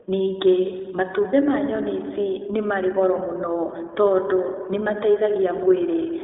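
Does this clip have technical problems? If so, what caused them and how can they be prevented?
Yes. Throughout, the speech carries plainly audible iLBC codec damage: each frame is coded independently, leaving a rough, synthetic edge that fits 20 ms frames at 15.2 kbps. A spectrogram shows nothing above 3.8 kHz and little below 300 Hz. Using a wideband codec prevents this.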